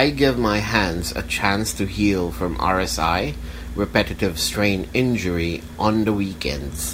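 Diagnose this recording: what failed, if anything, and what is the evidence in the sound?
The analogue wiring is where this one went wrong: there's video or display buzz running under the speech for the whole clip. It's a steady buzz at 75 Hz, the field rate of the picture, with a fizzy hash riding above it, sitting roughly 25 dB below the speech. A screen or its video cable is coupling into the audio lines, so the display's refresh shows up as a drone.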